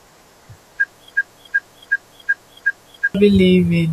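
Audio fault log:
1.15 to 3.15 s, broken-record loop: a fragment of speech about 0.37 s long plays five times back to back, each repeat identical, so the same snippet recurs in a rigid rhythm until normal playback resumes at 3.15 s. The speech due in those two seconds never arrives. Unlike an echo, the copies don't fade or overlap. Unlike a brief stutter, the loop lasts for seconds, which likely points to a stalled player or stream resending its last buffered piece.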